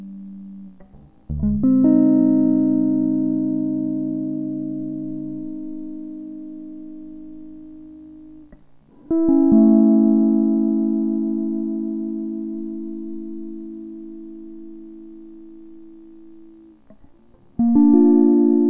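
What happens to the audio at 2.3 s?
At 2.3 s the music is affected by a wrong sample rate, which runs through the whole clip. Playback at half speed lowers pitch a full octave, consistent with 16 kHz material played at 8 kHz.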